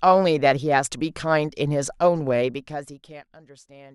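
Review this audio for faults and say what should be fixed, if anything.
Zipper noise from 2.36 to 3.39 s: a level drop of roughly 25 dB is applied in about 150 unsmoothed steps per second, so ticking rides the speech, unlike a clean fader fade. Ramp gain per sample or smooth the control so level changes glide instead of jumping.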